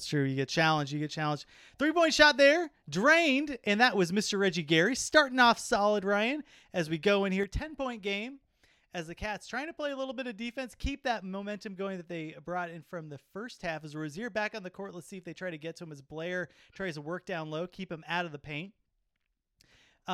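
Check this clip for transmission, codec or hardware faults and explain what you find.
One fault is present: a stereo channel drops out at 7.43 s, just after "as we go in", and stays lost to the end of the clip. One side of the stereo feed was likely cut, perhaps by a failing connection, so when the two channels are summed to mono only half the signal remains. From that point the speech, which sat equally in both channels, falls abruptly by about 6 dB and stays at that reduced level.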